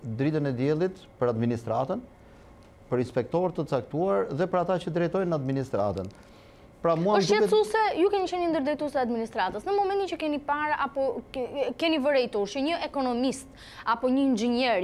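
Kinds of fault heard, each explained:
Electrical switching spike: at 12.68 s, a single sharp snap, fairly quiet at roughly -30 dBFS, sits on top of the sound. It is likely an arc from a nearby switch, motor or static discharge, picked up by the audio line as one very brief burst.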